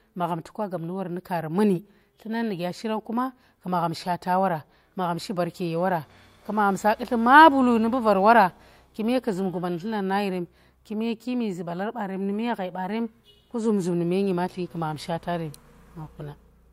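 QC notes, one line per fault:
No faults heard in the speech.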